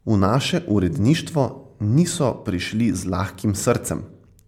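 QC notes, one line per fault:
throughout, generation loss: swirly, hollow, smeared speech with blurred attacks, likely from roughly five repeated MP3 encodes at 128 kbit/s, noise compounding each pass.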